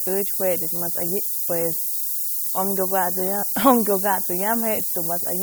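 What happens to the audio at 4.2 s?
Low bit depth with noise shaping is present at 4.2 s, as it is across the whole speech clip. The signal is carried on only about 5 bits, and the rounding error from that coarse quantisation is fed back so its energy is pushed upward in frequency. The result is a steady, thin hiss that climbs sharply toward the top of the band and sits at roughly the same level as the speech itself.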